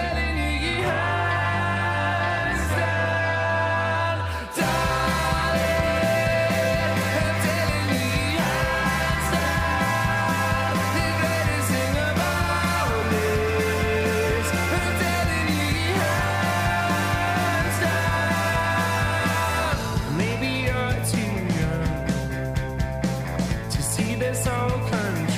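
No technical faults are audible anywhere in the recording.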